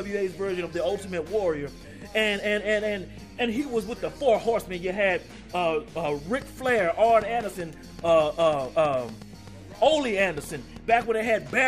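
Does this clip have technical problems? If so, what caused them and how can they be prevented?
Yes. From 6.42 to 11.51 s a train of clicks ticks over the sound, about 4.7 per second at an uneven spacing, roughly thirty in all, each peaking about 5 dB above the signal. It is likely interference from nearby equipment or a faulty connection or power supply. Shielding cables, moving equipment away and checking the interface would prevent it.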